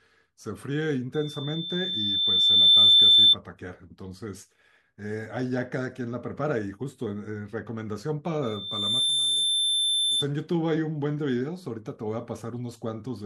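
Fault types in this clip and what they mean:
Loudspeaker feedback squeal: the microphone picks up its own loudspeaker and the loop runs away at 3.6 kHz. It swells over about 1.5 s to about 15 dB above the speech at 1.14–3.36 s, then returns faster and weaker at 8.42–10.26 s. Spectrogram: a bright horizontal 3.6 kHz line. Waveform: a swelling envelope.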